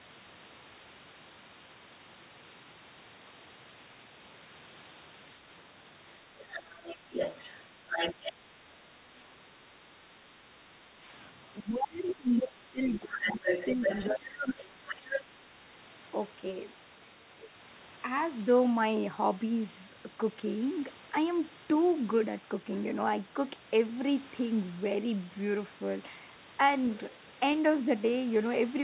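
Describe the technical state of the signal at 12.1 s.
At 12.1 s the echo canceller has likely met double talk, with both ends of the call speaking at once. Unable to tell the near talker apart from the loudspeaker echo, it pulls down everything it hears, so this is speech suppressed in double talk. Over 10.35 to 14.82 s the talker's voice sinks by as much as about 20 dB, thinning and breaking into fragments for roughly three seconds in total.

Inside that same stretch, from 12.07 to 12.41 s, the other side's voice is leaking through. The far talker's speech, played on the local loudspeaker, likely reached the microphone and survived the echo canceller instead of being subtracted. For about a third of a second a second voice sits underneath, roughly 15 dB below the talker. Like the rest of the call, it is band-limited with nothing above 4 kHz.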